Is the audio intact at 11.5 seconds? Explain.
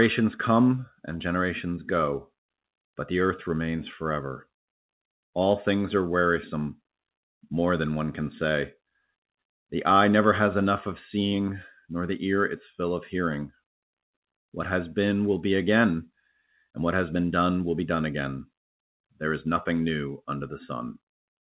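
Yes, the speech at 11.5 seconds is intact, with no dropout, glitch or other fault, only the narrow call-path bandwidth with nothing above 4 kHz.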